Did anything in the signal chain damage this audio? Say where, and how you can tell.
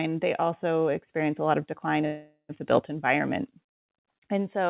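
Yes, there's a call audio freeze in the network and jitter buffer stage. Right after "a lot of decline", from 2.06 to 2.51 s, the last sound gets stretched into a fading buzz, ending in about 80 ms of silence, before "the built environment" picks up exactly where it left off. Nothing is lost, just roughly 0.43 s of filler. That points to packets likely stalling in transit, leaving the buffer empty. The narrowband G.711 call sound, with nothing above 4 kHz, is just the codec.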